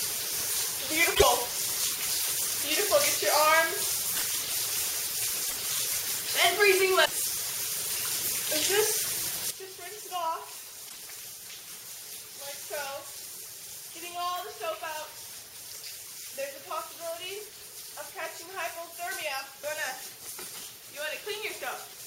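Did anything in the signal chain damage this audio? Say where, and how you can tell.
Yes. There are short glitches at 1.14, 4.14, 5.47, 7.04 and 10.88 s. Each lasts roughly 80 to 100 ms, about three to four frames at 26.1 ms per frame, and the audio jumps ahead at each one. That pattern points to a broken MP3 bit reservoir in the codec or storage stage, likely from frames being dropped. The frames after each gap reach back for borrowed bits and decode someone else's bytes.

At 9.51 s the whole level drops by about 12 dB in a single step and stays down to the end. The sound and the background noise fall together, with no fade. That's a sudden gain jump, likely a digital gain setting or bit shift applied in the processing or driver stage without a ramp. Because the noise floor drops along with the sound, the change happened to the whole signal and not at the source.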